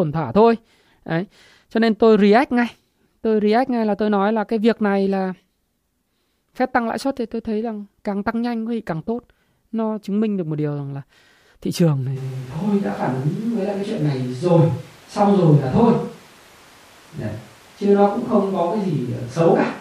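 Switch to a distant microphone at 12.18 s in this speech clip: the voice abruptly turns roomy and hollow, with thinner bass, and stays that way to the end. The level barely changes, but room noise rises to roughly 30 dB below the speech, likely because the close microphone dropped out and a farther one took over.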